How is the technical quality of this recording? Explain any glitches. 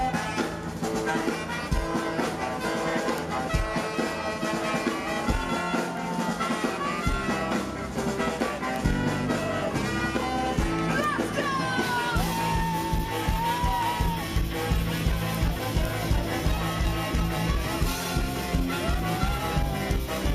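The recording carries a regular clicking fault throughout. Word clock ticks run from 0.14 s to 20.17 s: the receiving device's clock isn't locked to the sender's, so a single sample slips at each realignment, giving a tick about every 0.3 s, which fits a clock mismatch of roughly 70 ppm.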